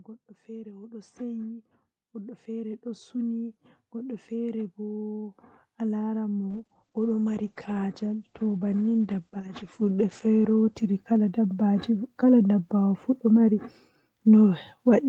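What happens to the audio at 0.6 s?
The automatic gain control judged the input too quiet and keeps raising its gain from 0.45 s to 11.89 s, so speech and background swell together by about 21 dB.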